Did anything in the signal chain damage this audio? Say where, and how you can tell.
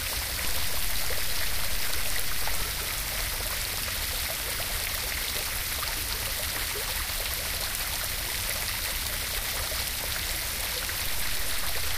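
Yes. Two DC steps at the converter or analogue input: the zero line jumps by about -26 dBFS at 0.45 s, returns at 2.62 s, then offsets by about -29 dBFS from 11.07 s to the end. Each transition thumps while the sound continues unchanged.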